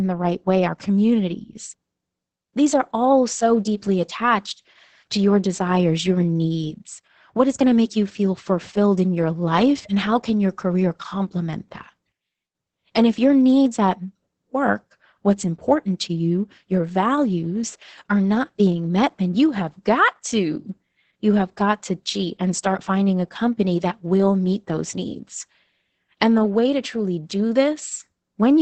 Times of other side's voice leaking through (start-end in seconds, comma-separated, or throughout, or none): none